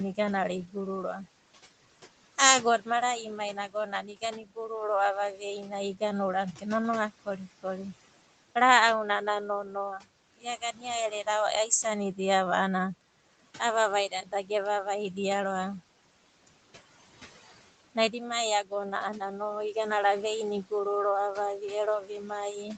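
Noise suppressor artifacts run through the whole clip. The suppressor pulls the steady room noise down by about 17 dB, so it dips between phrases and returns under the speech.

Speech cut by the noise suppressor occurs six times: at 3.73 to 4.57 s, 5.37 to 6.64 s, 9.26 to 11.27 s, 14.11 to 14.5 s, 17.95 to 19.76 s, and after "ro'ava vi" at 22.01 to 22.68 s. The suppressor mistakes quiet speech for noise and turns it down by up to about 15 to 16 dB early on and about 11 dB later. Each stretch loses roughly a tenth to a third of a second in total, so endings and soft sounds come out swallowed.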